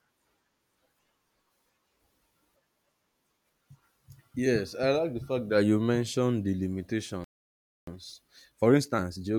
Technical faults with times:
7.24-7.87 playback stall
7.87-9.38 time-compressed catch-up

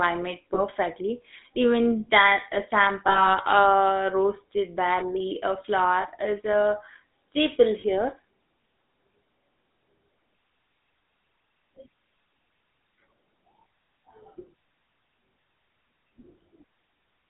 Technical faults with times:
0.00-17.29 GSM full-rate codec
0.54-0.61 lost GSM frames
3.08-3.34 lost GSM frames
6.02-6.07 lost GSM frames
7.80-7.84 lost GSM frames

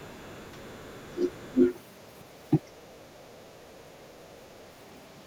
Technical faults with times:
0.00-1.59 other side's voice leaking through
1.06-1.27 speech suppressed in double talk
1.53-1.57 speech suppressed in double talk
3.29-3.37 speech suppressed in double talk

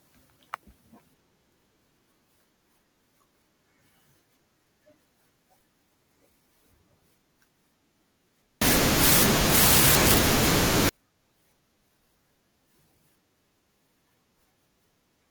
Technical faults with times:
8.62-10.89 samples built from the wrong bytes

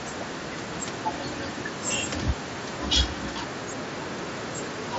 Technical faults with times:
none

